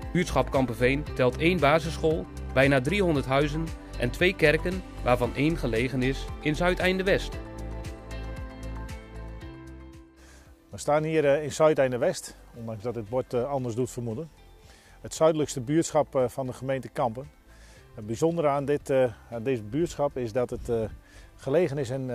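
Nothing goes wrong anywhere in the recording, so there's no technical fault to point out.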